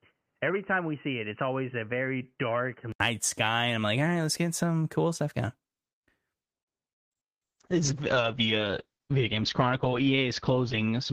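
From 0 to 3.00 s, the input likely switched to a poorer device: the speech is muffled, with nothing above 3 kHz, about 5 dB quieter, with an 80 ms silence at the switch. From 7.0 s to the end, a call bitrate drop makes the speech rough and muffled, cutting the bandwidth from 20 kHz to 8 kHz, which fits a fall from about 32 to 8 kbps, lasting 3.75 s at its lowest.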